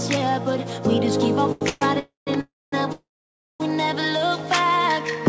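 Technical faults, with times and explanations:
1.52–1.63 s: short stall from a late packet. The last sound is held about 90 ms while a packet arrives late, then continues from the same point with nothing lost. The waveform shows a stretched, repeating stretch; the spectrogram shows smeared, flattened bands.
1.69–1.83, 1.99–2.29, 2.41–2.74 and 2.92–3.62 s: call audio freeze, lasting 122, 277, 316 and 675 ms. Each starts as a fading buzzy continuation of the last sound, then drops to silence for about 10, 160, 230 and 560 ms before the audio resumes where it stopped, with nothing missing. The likely cause is packets held up in transit, emptying the jitter buffer. On the waveform these appear as decaying tails followed by flat gaps. On the spectrogram they show as fading horizontal streaks, then blank columns. The G.722 band limit at 8 kHz remains visible across them.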